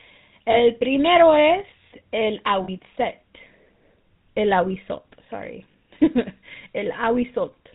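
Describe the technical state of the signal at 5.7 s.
A brief rough, metallic ring at 5.72 s comes from a lost GSM frame. The decoder filled the gap by repeating the previous good frame's settings. The ringing lasts about 20 ms, which fits a single lost frame, before normal decoding resumes.

Around it, the audio has the buzzy, gravelly roughness of the GSM full-rate codec, plainly audible, with nothing above 4 kHz. The codec models the vocal tract and excites it with sparse, regularly spaced pulses, consistent with its 13 kbps rate.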